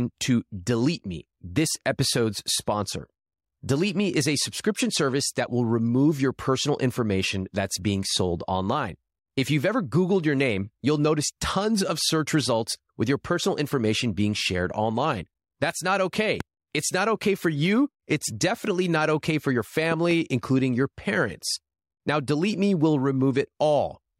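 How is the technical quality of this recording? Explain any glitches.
The recording has loud pops at two points. A single pop occurs at 16.40 to 16.43 s, and a double pop follows "not okay for your" at 19.92 to 20.13 s, before "including your parents." Each stands roughly 10 dB above the speech, which continues underneath. The likely cause is an electrical transient, such as a plug, switch or static discharge.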